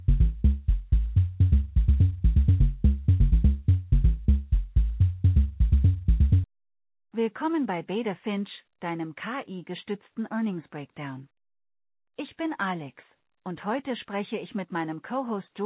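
No technical faults are present; the audio has passed through a WebRTC call path whose band stops at 4 kHz, which fits G.711 A-law telephone coding at 64 kbps.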